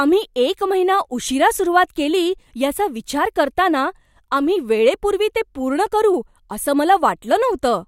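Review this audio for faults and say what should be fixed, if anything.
No faults; nothing needs fixing.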